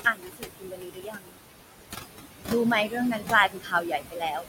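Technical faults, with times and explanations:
Throughout: noise suppressor artifacts. The suppressor is pulling the room noise down by about 19 dB, band by band and frame by frame, so the background dips away in the gaps and swells back up under the speech. That noise sits only about 7 dB below the voice, so the suppressor works hard.
0.05–1.38 s and 3.49–4.47 s: speech cut by the noise suppressor. In both stretches the suppressor mistakes parts of the speech for noise and turns them down along with the background, by about 22 dB at worst in the first and about 19 dB in the second. That adds up to roughly a second of affected sound early on and most of a second near the end, where the parts it turns down come out swallowed and faint.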